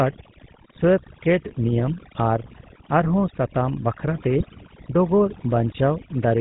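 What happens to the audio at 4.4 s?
From 4.38 to 4.45 s the speech breaks into a short squawk and gargle. These are GSM bit errors: corrupted filter, pitch or gain values make the decoder warp the spectrum and jolt the level. The span fits about three 20 ms frames. A dropout would leave silence or a gap. Here the decoder keeps producing sound, but wrong sound.

Under that burst, and across the whole clip, is the GSM full-rate codec. Its pulse-driven vocal-tract model gives the voice a buzzy, gravelly edge, and nothing comes through above 4 kHz. The roughness is steady rather than bursty, which sets it apart from the errors.

Overdone noise removal is also present. The background drops and breaks up into twinkling specks, and quiet parts of the voice were cut along with the noise.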